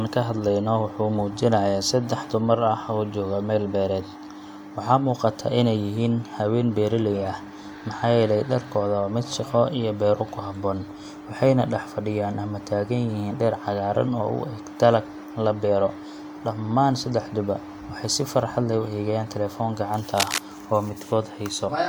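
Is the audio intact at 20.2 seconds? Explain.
No. From 20.17 to 20.39 s a dense, uneven scratching and rustling runs over the speech at roughly the same level as the voice. This is cable scratch noise, likely from a worn cable or connector being moved so that its contact resistance jumps rapidly.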